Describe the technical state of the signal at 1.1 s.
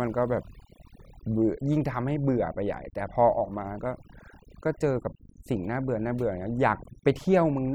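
Overdone noise removal runs through the whole clip, including 1.1 s: an over-aggressive reduction stage cuts frequency bands near the noise estimate, leaving a lowered background broken into twinkling specks.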